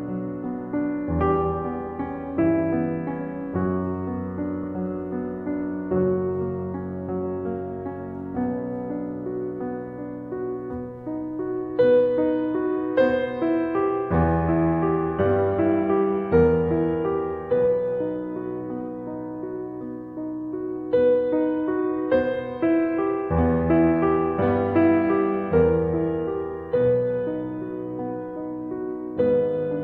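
A music recording with no technical faults to point to anywhere in the signal.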